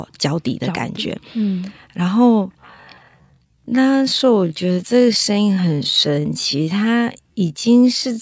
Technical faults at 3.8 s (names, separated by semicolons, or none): time-stretched section